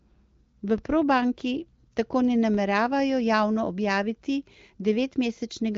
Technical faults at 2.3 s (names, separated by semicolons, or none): DC step